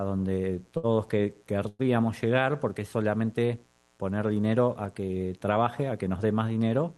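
Mains buzz runs through the whole clip, a steady, raspy 60 Hz buzz sitting well below the speech. Its edge comes from sharp switching spikes, twice per mains cycle, from something like a dimmer, rectifier or poorly shielded cable, and those spikes spread harmonics of 60 Hz up into the kilohertz range. That is why it sounds gritty rather than like a smooth hum, and it is present under every part of the speech.

A short stall from a late packet occurs from 0.77 to 0.85 s. A packet missed its playout time, the jitter buffer ran dry, and the receiver stretched the last bit of sound for about 61 ms until the data turned up, then resumed from the same point. Nothing is lost, but the sound at that spot is held unnaturally long with a faint buzzy smear, and everything after it plays about 61 ms later.

A call audio freeze follows from 1.68 to 1.81 s. Playback stalls, and the gap is filled with about 107 ms of the last sound continued as a fading buzz, ending in roughly 10 ms of silence before the audio picks up where it stopped. 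The likely cause is packets held up in transit, emptying the jitter buffer. No speech goes missing, but a hitch is inserted and the timing shifts about 107 ms later.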